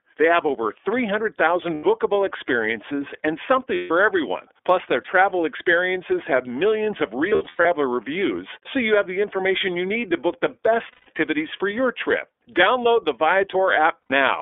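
A speech clip, carried end to end through the iLBC codec. The band is held to about 300 Hz to 3.5 kHz, so everything above is gone and the low end is thin. The coding damage is plainly audible. Each frame's excitation is coded on its own, and the voice comes out clear but rough and slightly synthetic. The frame rhythm fits iLBC's 30 ms mode at 13.33 kbps. There are also five bursts of lost iLBC frames. The decoder fills each gap by repeating the last pitch cycle mixed with noise. That sounds like a held, faintly buzzy vowel. The first runs from 1.74 to 1.83 s, 90 ms, just before "experiences and". The second, 150 ms, runs from 3.75 to 3.91 s, right after "experiences and". From 7.29 to 7.66 s, between "experiences have millions of" and "reviews so you have", about 240 ms is lost in scattered pieces, the longest about a tenth of a second. Two more follow, 150 ms at 10.92 to 11.08 s and 90 ms at 14.02 to 14.11 s. 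Because frames stand alone, the voice recovers almost at once after each gap.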